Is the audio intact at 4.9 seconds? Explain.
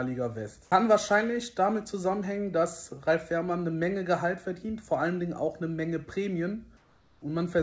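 Yes, the audio is intact at 4.9 s, with only the expected sound of a G.722 call path, including its band limit at 8 kHz, present there.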